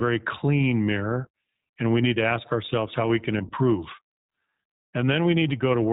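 iLBC codec, throughout: the speech is band-limited to narrowband with nothing above 4 kHz, and each frame's excitation is coded independently, which leaves a plainly audible rough, synthetic edge consistent with the 15.2 kbps, 20 ms mode.

Lost iLBC frames, at 3.39 to 3.41 s just after "ourselves how we can" and at 5.40 to 5.43 s: each gap fits a single missing 20 ms frame. The decoder repeats the last pitch cycle mixed with noise, giving a brief buzzy held vowel, and the speech recovers almost at once.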